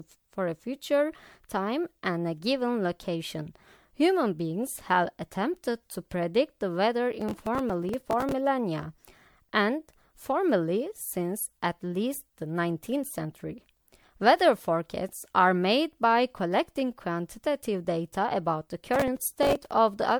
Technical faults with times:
0.00-20.20 generation loss
7.21-8.32 processor overload crackle
18.94-19.71 processor overload crackle

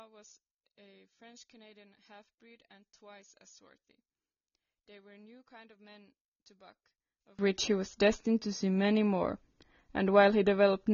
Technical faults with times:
0.00-10.93 low-bitrate audio saved at a high bitrate
0.00-7.39 one channel inverted

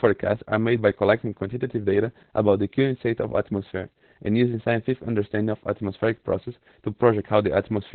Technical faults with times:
0.00-7.94 Opus voice compression

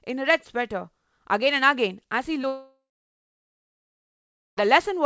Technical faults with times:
2.42-2.45 short concealed packet loss
2.47-4.59 long network dropout

